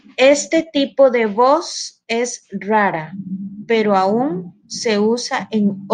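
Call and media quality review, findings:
No call or media quality faults found in this speech clip.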